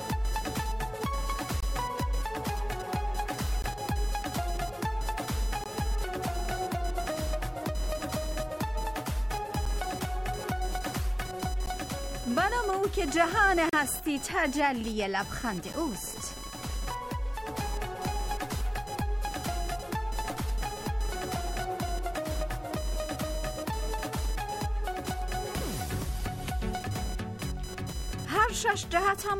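A thin, fluctuating buzz runs from start to finish, pulsing at around 1 kHz and sitting roughly 15 dB below the sound. It keeps its own rhythm regardless of what the sound is doing, which marks it as computer activity noise. The machine's changing processor or graphics load disturbs the ground shared with the audio circuit, and that disturbance leaks into the signal as a buzz independent of the programme material.

Layered on top are abrupt dropouts: 1.60–1.63, 3.62, 5.64, 9.65, 11.66, 13.69–13.73 and 15.73 s. Each is a hard-edged hole of silence lasting between about 9 and 36 ms, with the longest at 13.69 s. They fall on a two-second grid, which points to a gap between stream segments. The time stamps at these segment joins leave a short space, and the player fills it with silence. Nothing is lost; the sound simply resumes late.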